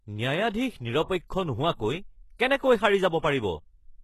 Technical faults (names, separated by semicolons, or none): HE-AAC compression